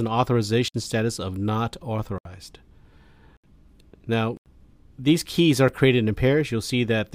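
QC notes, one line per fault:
0.68 to 5.68 s, block of digital silence: the audio drops abruptly to silence at 0.68–0.74 s (59 ms), 2.18–2.25 s (70 ms), 3.37–3.44 s (70 ms), 4.37–4.46 s (87 ms) and 5.68 s (5 ms). With no fade, each cut out and back is abrupt. The longer blocks are heard as short holes, the last as a tick.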